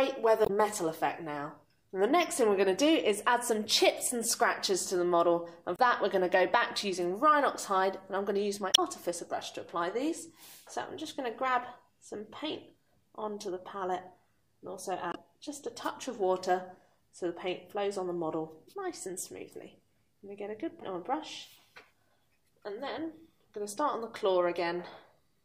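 Damaged data in a compressed stream breaks the audio at 0.43, 5.76, 8.71, 15.09 and 20.78 s, each time for 37 to 80 ms. Corrupt frames throw the decoder out of sync until it finds the next frame header.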